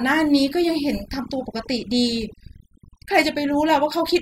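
Across the whole clip the speech carries overdone noise removal. A noise suppressor pushed too hard is cutting individual frequency bands whenever they sit close to its noise estimate, so the background drops and breaks up into twinkling specks, and softer parts of the voice are stripped away. Unlike a low-pass filter, the loss is patchy and shifting rather than a steady dulling of the top end.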